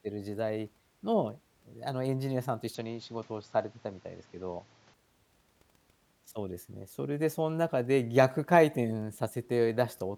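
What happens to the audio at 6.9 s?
Nothing goes wrong at 6.9 s; the speech there plays through intact, with no dropout, click, distortion or other fault.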